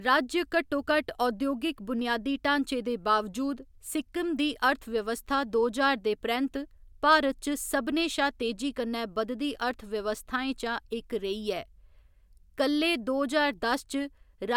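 Nothing in the speech stood out as a technical fault on listening.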